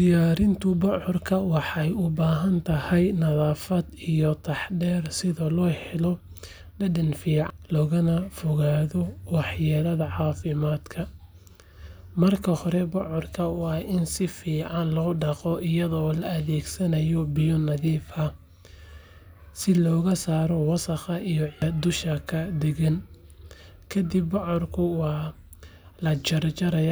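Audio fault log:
7.50 s and 21.62 s: damaged data in a compressed stream. Brief glitches in the speech, the first just before "logana fogaado wax", where corrupted bytes made the decoder misread a frame and resynchronise.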